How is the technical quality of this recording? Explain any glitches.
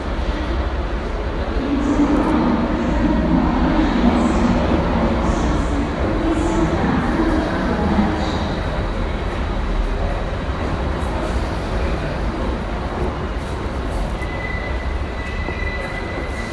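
The recording's technical quality holds steady throughout, with no glitches or dropouts audible anywhere in the signal.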